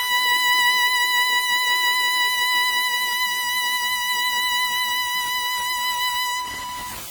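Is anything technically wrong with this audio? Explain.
Yes, two problems run through the whole music clip.

There's a stuck bit the entire time: a distortion riding on the music, and the quiet stretches fill with noise instead of going silent. That's likely one data bit jammed at a fixed value, so about half the samples land off by that bit's weight.

WMA compression is also audible throughout, and it's heavy. It sounds washy and ringing, with hiss that swells and fades with the music, which fits the first-generation WMA encoder at around 32 kbps. Long transform blocks smear the quantisation noise over tens of milliseconds, and weaker components get dropped. There's nothing above 20.1 kHz.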